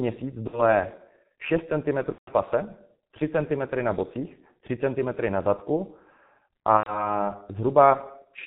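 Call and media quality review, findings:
G.723.1 codec, whole clip: speech muffled and hoarse, nothing above 4 kHz, consonants smeared. The heavy damage fits a 6.3 kbit/s mode; 30 ms frames and a slowly updated voice model can't track fast articulation.

VoIP packet loss concealed by the speech codec at 0.47–0.68 s, 2.12–2.31 s and 6.77–7.16 s: buzzy, fading, stretched tone, then weak distorted speech afterward. The decoder extrapolates the last pitch and filter; gaps of about 60, 150 and 90 ms point to two, five and three lost 30 ms frames.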